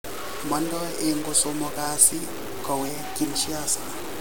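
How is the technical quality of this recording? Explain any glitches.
The technical quality is poor: the speech carries a coarse grain from start to finish. This is likely low bit depth without dither, with samples truncated to something like 6 bits. The rounding error tracks the speech, so the grit sits barely 10 dB below it, and quiet stretches sputter or drop out.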